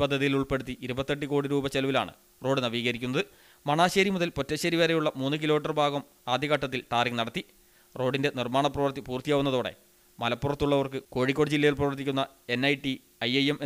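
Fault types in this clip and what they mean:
No dropouts, distortion, timing errors or other technical problems can be heard anywhere in the signal.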